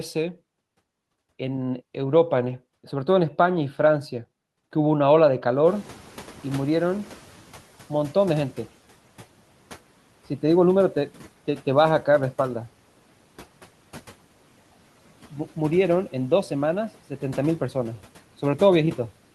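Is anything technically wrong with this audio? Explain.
Yes. From 5.65 to 7.65 s, the noise suppressor is catching up. Room noise jumps around 5.5 s, and the suppressor's noise estimate takes 2 s to follow, so the noise first passes with less reduction, then sinks by about 8 dB. A spectrogram shows a bright noise floor fading over those two seconds.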